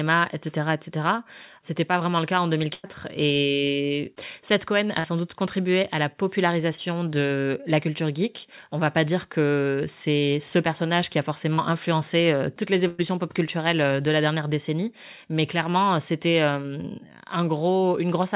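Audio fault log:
2.74 to 2.86 s and 12.88 to 13.03 s: burst of packet loss. About 100 ms of audio went missing each time. The receiver extended the last sound and faded it out, leaving a held buzz or fading hiss. The second gap falls between "influencé euh toutes les" and "pop culturelles euh de", and speech resumes slightly ahead.
5.00 s, 6.76 s and 11.54 to 11.60 s: short concealed packet loss. Between 20 and 40 ms arrived too late each time. The receiver continued the preceding sound from its pitch or as shaped noise, then blended back. This gives a brief smear or wobble just before "de la" and between "ce personnage qui a" and "influencé euh toutes les".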